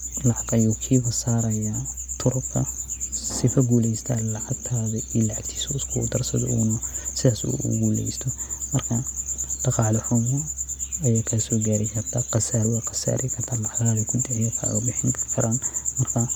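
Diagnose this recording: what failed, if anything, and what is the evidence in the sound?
Codec stage. Throughout, the speech has a plainly audible breathy, grainy edge. Likely Bluetooth LC3 compression: 10 ms transform frames, which fits a 48 kbps stream.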